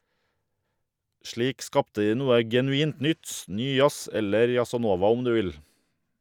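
No technical faults can be heard in this speech recording, so there is nothing to describe in time order.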